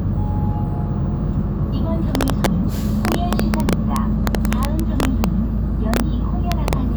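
Violent cracks break out on the loudest passages at 2.15 to 2.46 s, across a long stretch from 3.05 to 5.24 s, briefly at 5.94 to 6.00 s, and again at 6.52 to 6.73 s. These are integer overflow: a gain pushed peaks about 4 dB past the integer limit in the first two spans, about 2 dB and 1 dB in the last two, and instead of clipping, those samples wrapped to the opposite extreme, snapping harshly across the full range.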